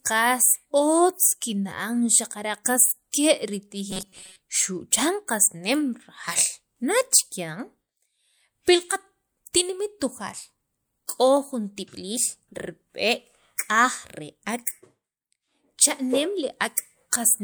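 From 3.91 to 4.38 s the speech turns into a rigid, metallic buzz at 188 Hz that still loosely tracks the speech. This is robotic sound from repeated short buffers, likely caused by playback looping a roughly 5 ms slice while about half the real audio is skipped.

At 11.07 s a pre-echo appears: a brief hiss of about 18 ms precedes a sharp attack, softening its onset. The codec spread quantisation noise across its block, so noise sized for the loud transient leaked into the quiet moment before it.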